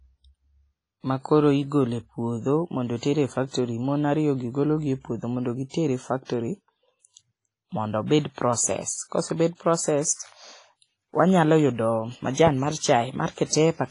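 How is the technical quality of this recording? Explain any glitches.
The technical quality is poor: the speech sounds washy and ringing throughout, and several attacks are smeared by a brief hiss.

WMA compression: for the whole clip there is a hiss that swells and fades with the speech, a metallic ringing, and nothing above 10.1 kHz. The likely cause is heavy WMA coding at a low bitrate, roughly what 24 kbps would give. Its long transform blocks spread quantisation noise over tens of milliseconds and drop weak detail.

Pre-echo: at 2.98 s (just after "makoro igole puodho mondo"), 3.48 s, 5.69 s (just after "puodho modo"), 6.25 s and 8.21 s, a short hiss of about 38 to 54 ms runs ahead of a sharp onset, which sounds soft and blurred. The codec spreads noise sized for the loud attack across its whole block, so it also fills the quiet moment before the attack.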